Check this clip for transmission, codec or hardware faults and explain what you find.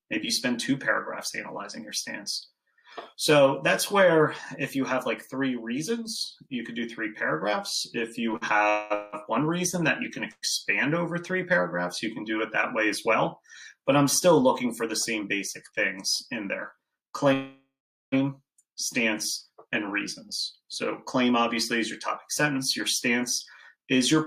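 There are transmission faults here, all of the kind a network call produces when packets arrive unevenly: a burst of stuttering, three freezes, and two stretches where the audio is quietly hurried.

Between 8.31 and 9.15 s the sound drags and catches three times, with the last sound smeared forward to bridge each hold-up. The longest hold-up is 183 ms, and together they fill about 243 ms, nearly a third of that span. These are repeated stalls (stutter). Packets kept arriving later than they were due, so the jitter buffer drained again and again and the receiver stretched what it already had. Nothing appears to be lost, but the flow halts.

The call audio freezes at three points. From 8.69 to 8.92 s the sound hangs as a 209 ms continuation of the last sound, with no silence. At 10.31 s there is a shorter 111 ms hang that fades out, including about 30 ms of silence before the audio resumes at 10.44 s. 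The worst is 17.33 to 18.14 s, where the sound sustains and decays for 792 ms, the last 400 ms of it silent. The likely cause is packets being held up in transit until the jitter buffer ran dry. Each freeze inserts a gap without dropping audio.

From 14.41 to 15.73 s the audio runs slightly fast, at 104% speed with the pitch unchanged, taking out roughly 50 ms. The same thing happens over a longer stretch from 19.50 to 24.13 s, at 103% and roughly 150 ms removed. This is jitter buffer speed-up. The buffer held more audio than its target, as happens when delayed packets arrive together, so the receiver clipped out tiny pitch-period-sized pieces repeatedly to win back the delay. At these speeds the change is small and falls short of sounding clearly hurried.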